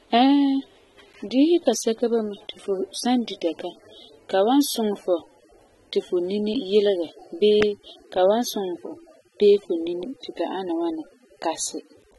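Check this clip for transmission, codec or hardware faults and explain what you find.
One codec fault runs through the whole speech clip: AAC compression, most likely AAC-LC at a low bitrate. The damage is plainly audible throughout. Nothing sounds above 11.8 kHz, which suggests a rate in the high twenties of kbps. The encoder quantises each frame's spectrum coarsely, dulling the top end and adding a warbling, fizzy smear on sibilants and held sounds. That shifting texture separates it from a simple low-pass filter, which would sound dull but stay clean.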